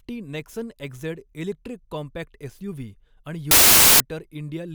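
At 3.51 s, right after "कॉम्पॅक्ट एसयूव्ही आणि", the speech gives way to loud noise until 4.0 s: samples built from the wrong bytes. Misassembled bytes push the rapidly changing low bits into each sample's top, so the result is harsh, broadband noise.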